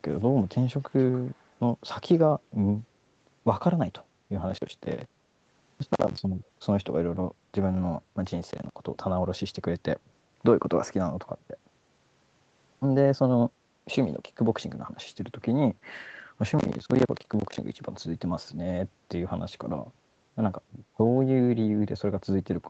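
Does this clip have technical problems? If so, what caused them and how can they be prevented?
Yes. Echo leak: the far side likely played the call through a loudspeaker, and its echo canceller failed to remove everything its microphone caught. That residue returned as a faint copy of the speech, about 30 to 35 dB down and lagging by 291 ms, at 0.81 to 1.56 s and again at 2.14 to 2.18 s. Using a headset, or retuning the canceller's echo-path tracking, would prevent this.

Processor overload crackle: the processor repeatedly missed deadlines for audio buffers of roughly 10 ms, and each missed buffer was filled with silence. Dozens of these tiny hard-edged dropouts run together as gritty crackle from 4.50 to 6.19 s, 8.51 to 8.74 s and 16.59 to 17.58 s. Reducing competing CPU load or giving the audio thread higher priority would prevent it.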